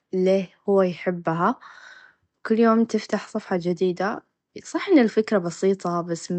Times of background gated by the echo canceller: none

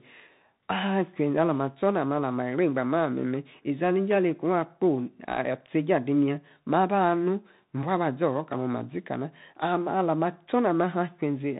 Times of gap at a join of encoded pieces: none

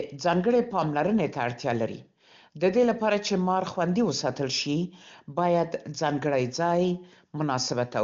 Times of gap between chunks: none

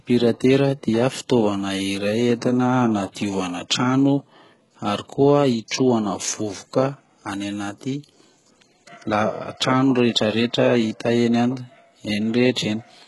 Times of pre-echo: 5.68-5.71

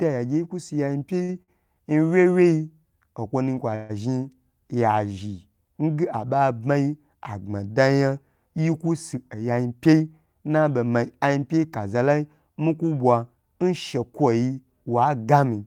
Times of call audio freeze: 3.75-3.91

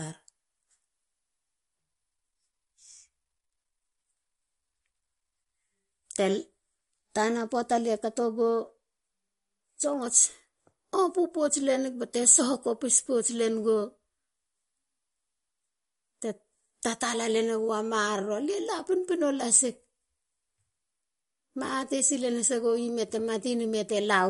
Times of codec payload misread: none

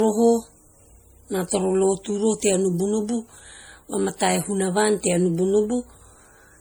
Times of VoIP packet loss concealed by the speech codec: none

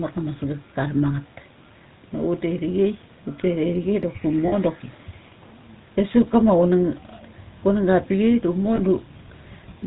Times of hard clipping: 6.00-6.52, 7.89-8.29

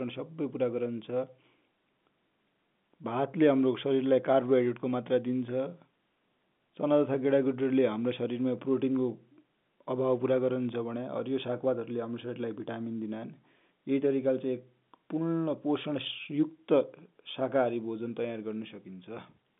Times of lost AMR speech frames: none

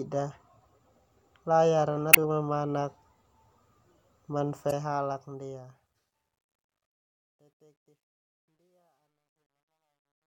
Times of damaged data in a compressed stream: 2.10-2.17, 4.67-4.73

